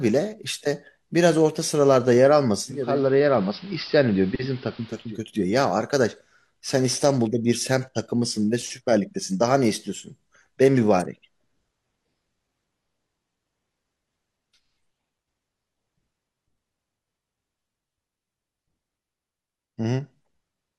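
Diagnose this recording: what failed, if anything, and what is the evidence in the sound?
Digital radio blending to analogue in the receiver, 2.67 to 5.21 s. Speech cross-fades over 0.39 s to AM. Hiss about 25 dB below the speech.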